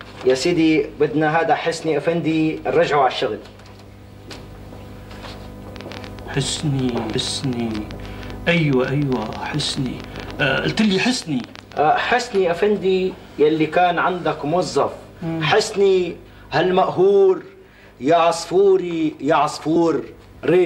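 From 5.76 to 12.36 s there's a train of clicks, about 10.6 per second at an uneven pace, so roughly seventy near-identical pops, peaking around 10 dB above the sound and ticking through the pauses too. That's likely interference from nearby gear or a faulty connection.

At 7.15 s and again at 19.76 s you get compressed frames skipped. The decoder dropped a few 32 ms frames, so the audio jumps ahead by about 150 ms and then about 100 ms.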